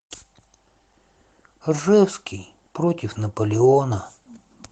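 No technical faults can be heard anywhere in the speech. The Opus voice compression leaves only a light coding texture, with the band reaching well above 8 kHz in the hybrid super-wideband mode.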